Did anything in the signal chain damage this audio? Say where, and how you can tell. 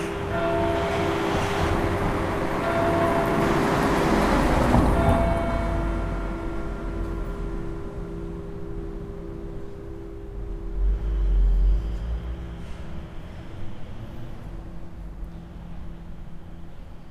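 No, nothing in the signal chain damaged these sounds. Listening through them, nothing points to trouble at any stage.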